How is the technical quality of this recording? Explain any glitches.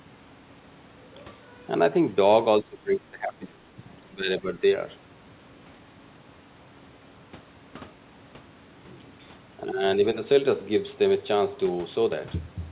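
The speech dips three times where a loudspeaker echo canceller likely clamped down during double talk: 2.61–3.77 s (deepest, about 20 dB), 4.09–4.62 s and 9.63–9.82 s. Each is a speech suppressed in double talk event, shown as a sudden envelope notch and faded spectrogram bands. Everything sits below 4 kHz, which fits a narrowband G.711-style call path.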